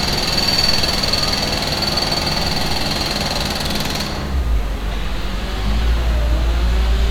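This clip of everyday sounds has nothing technically wrong with it.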